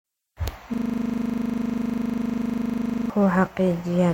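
At 0.74 s the speech locks into a system hang loop that lasts until 3.10 s. The playback side stalled while the sound hardware kept replaying one 40 ms stretch of its ring buffer, some sixty times over. At that length the repeats merge into a steady 25 Hz buzz rather than a stutter. Unlike mains hum, the buzz carries the frozen fragment's exact timbre, and it stops abruptly when normal audio resumes.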